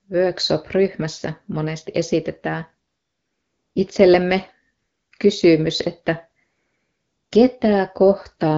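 From 2.87 to 3.75 s, 4.77 to 5.11 s and 6.43 to 7.31 s, AMR comfort noise replaces the real background in the speech pauses: the phone stopped sending speech frames, and the receiver substituted smooth synthetic hiss. Unlike a noise gate's dead silence, a steady noise floor remains, switching abruptly in and out.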